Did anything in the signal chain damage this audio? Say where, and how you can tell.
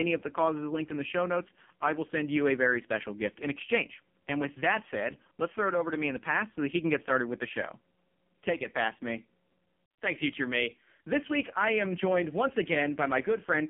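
Yes, at the codec stage: the whole clip has passed through the AMR narrowband mobile codec. The speech is held inside a 150 Hz to 3.4 kHz phone band, and a spectrogram shows a hard ceiling at 3.4 kHz with nothing above it. The voice is heavily buzzy and synthetic, with smeared, coarse harmonics, which points to one of the lowest AMR-NB modes, around 5 kbps, where the vocal-tract model has very few pulses per frame to describe the sound.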